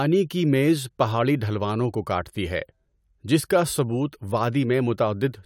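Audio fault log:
Nothing stood out on listening to the speech in this recording.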